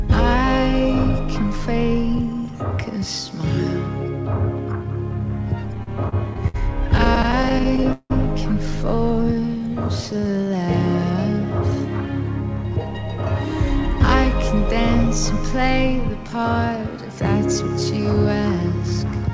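From 5.75 to 8.12 s the audio catches and hangs about 18 times, each time holding or smearing the last sound before moving on. The longest hold lasts 174 ms and the longer ones fade out. This is repeated stalls (stutter): packets arrived late, so the jitter buffer kept running dry and the receiver stretched the last sound to cover about 435 ms in total, roughly 18% of that stretch. Nothing is lost, but the passage drags and stumbles.

Between 9.22 and 10.63 s the audio slows to about 90% speed while keeping its pitch, so sounds feel drawn out. This is a jitter buffer slow-down. With its reserve running low, the receiver repeated single pitch periods and slivers of pauses over and over, adding 148 ms to build the buffer back up.

From 14.68 to 17.20 s the opposite happens: the audio runs about 5% fast at unchanged pitch and sounds a little rushed. This is a jitter buffer speed-up. Too much audio had piled up in the buffer, so the receiver trimmed short pitch-period pieces, about 150 ms in all, to bring the delay down. 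Throughout, the audio passes through a wideband call codec with nothing above 8 kHz, which points to G.722.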